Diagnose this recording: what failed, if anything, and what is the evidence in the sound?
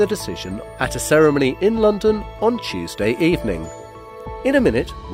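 What you're hearing at 4.21 s is a bit error spike: a single isolated tick, broadband and with nothing to do with the surrounding sound, peaking at about -24 dBFS. It's one sample jumping and snapping straight back, the signature of a flipped bit in memory, storage or a digital link rather than anything analogue or codec-related. A high-order bit changed, throwing that one value off by a power of two, and the very next sample was correct again.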